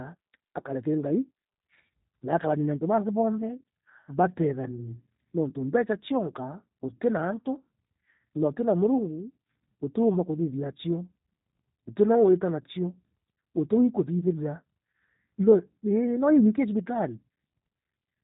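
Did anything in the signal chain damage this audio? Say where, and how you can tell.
Yes. The damage is at the codec stage and runs through the whole speech clip: the G.729 codec. Nothing passes above about 3.8 kHz, and the speech has a rough, buzzy, slightly synthetic grain, which fits an 8 kbit/s G.729A stream rebuilding each 10 ms frame from a vocal tract filter, a pitch predictor and a few pulses. A plain narrowband filter would cut the same top end but leave the remaining sound smooth. This grain comes from the speech model itself.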